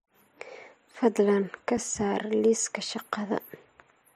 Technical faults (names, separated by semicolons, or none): block of digital silence